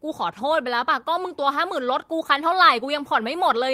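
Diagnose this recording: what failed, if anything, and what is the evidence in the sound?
The failure is at the network stage: a lost packet rebuilt from error correction. From 2.23 to 2.25 s the speech turns briefly rougher and noisier, for 20 ms. There is no gap or silence, even though a single packet was lost. The following packet carried a low-bitrate copy of the missing audio, using Opus in-band forward error correction. The decoder played that copy instead. It filled the hole, but with coarser detail.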